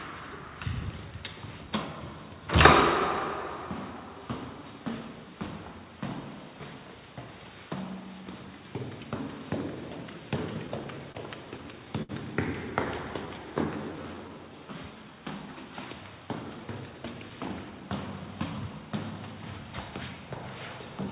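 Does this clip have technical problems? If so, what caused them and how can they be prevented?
Yes. From 10.54 to 11.17 s and again from 11.57 to 12.11 s the audio catches and stutters. These are repeated stalls (stutter): packets arrived late, the jitter buffer kept running dry, and the receiver stretched the last sound across four short gaps in each stretch, the longest 28 ms and then 68 ms. A deeper or more adaptive jitter buffer and a steadier network path with less delay variation would prevent this.

Between 13.93 and 14.68 s the sound drags at unchanged pitch, running at about 89% speed. This jitter buffer slow-down added roughly 96 ms by repeating pitch periods to rebuild a depleted reserve. Keeping arrival timing stable, so the buffer rarely drains, would avoid these corrective stretches.

From 16.60 to 18.81 s the audio hurries slightly, about 107% speed, with no pitch change. 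This is a jitter buffer speed-up, where the receiver trimmed around 150 ms to shed excess delay. Smoother packet delivery and gentler buffer-target adjustments would reduce it.

Throughout, nothing is heard above 4 kHz, which fits the narrowband G.711 A-law call codec carrying the audio.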